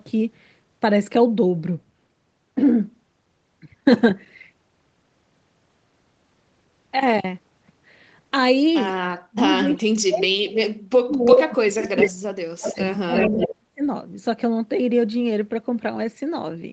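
From 9.29 to 11.94 s the speech dips and breaks into pieces, falling by about 40 dB at its deepest for roughly two seconds in all: speech suppressed in double talk, likely an echo canceller turning down both sides while they overlapped. At 11.32 to 11.36 s a faint scrap of the voice returns about 15 dB below the speech, 400 ms late. This is an echo leak, likely loudspeaker pickup that the far end's canceller missed. From 11.95 to 12.11 s a delayed copy of the voice comes back at full speech level, 349 ms behind. This is another echo leak with the same likely cause. From 12.11 to 13.83 s the speech is again chopped and pulled down by up to about 40 dB, for around one and a half seconds in total. This is speech suppressed in double talk, likely the canceller clamping during overlapping talk. Inside that stretch, echo leaks at 12.65 to 12.81 s and 13.16 to 13.47 s bring back the voice 349 ms late, at about 15 dB and about 5 dB below the speech. 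They likely come from the same incompletely cancelled loudspeaker echo.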